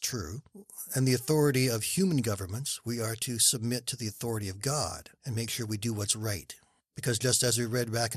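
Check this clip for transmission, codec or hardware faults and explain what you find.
There's one codec problem, and it runs through the whole speech clip. The sound is dull and gurgly, with a granular, watery edge that sounds like MP2 compression, likely the MPEG Layer II codec at a low bitrate. The damage fits something around 80 kbps. Layer II splits the signal into 32 sub-bands and shares out bits between them. When bits run short, the upper bands get switched off and flicker in and out, which takes away the top end. The bands that remain are quantised coarsely, and that gives the gritty, bubbling texture.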